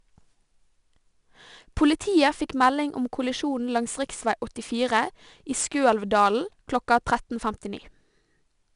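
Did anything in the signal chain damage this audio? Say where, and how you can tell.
Yes, at the codec stage: 4-bit ADPCM compression across the whole speech clip. A gritty hiss rides on every loud syllable and vanishes in pauses, with roughness on sharp onsets. Nothing exists above 10.6 kHz, which fits about 22 kHz sampling at roughly 89 kbps. Steady background hiss wouldn't follow level this way.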